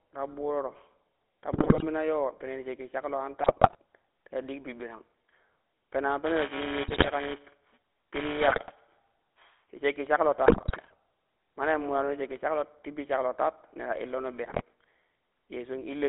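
The whole clip runs through the GSM full-rate codec, and you can plainly hear it. The speech has that buzzy, gravelly edge from the pulse-driven vocal-tract model, and it's squeezed into a phone band of roughly 300 Hz to 3.6 kHz, which fits the 13 kbps full-rate coder.

On top of that come GSM bit errors at 1.52–1.85 s, 3.42–3.76 s, 6.88–7.10 s, 8.48–8.73 s, 10.46–10.94 s and 14.44–14.63 s. Corrupted filter, pitch and gain values reach the decoder, so the voice breaks into squawks, pops and gargling for those stretches. The error rate sits around 2.7 to 4 percent throughout.

From 6.26 s to 9.15 s there's also buffer tearing, ending just before "ti shakki shaklo". The writer and the hardware reader are crossing inside each period. A small slice of every buffer replays audio from a few milliseconds earlier, with hard joins on both sides. That gives a robotic 345 Hz buzz over the speech, which fits a 128-sample buffer. 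Two of the bit-error bursts land inside this stretch.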